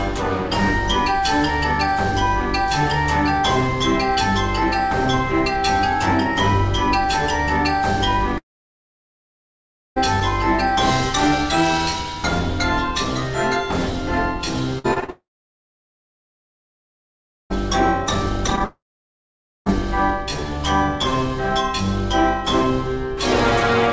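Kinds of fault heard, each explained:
Long network dropout: Three times the audio just stops, most likely because the network stopped delivering it for a while: about 1.6 s from 8.38 s, 2.4 s from 15.1 s, and 1.0 s from 18.64 s. Each starts with a short fading buzz where the receiver stretches the last sound, then goes to near silence until the audio picks up again later, with that stretch simply gone.
Repeated packet loss (robotic sound): Twice the sound turns choppy as small chunks keep going missing and get patched over. From 14.79 to 15.1 s there are four gaps of up to 50 ms, covering about 42% of that span, and that leads straight into the long dropout. From 18.46 to 18.62 s there are five shorter gaps of up to 17 ms, covering about 37% of the span, just before the last dropout.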